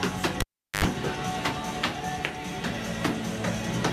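Cable pulled and plugged in, from 0.40 to 0.84 s: a live lead is yanked out and pushed back while the signal is running. A sharp pop marks the break, then about 390 ms of near silence with the path open. As the plug goes back in, the tip makes contact before the ground does, letting through roughly 80 ms of 50 Hz mains buzz, and a second pop sounds as the full connection seats and the audio returns.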